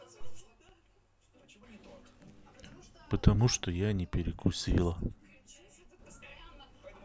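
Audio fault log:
0.40–1.63 s and 3.64–5.99 s, one channel drops out: the speech level falls abruptly by about 6 dB and jumps back up at the end of each stretch. The likely cause is one stereo channel going silent, so the mono sum carries only the surviving side and everything shared between the two channels loses half its amplitude. Unlike a gain dip or ducking, the step is exactly 6 dB with hard edges and no ramp.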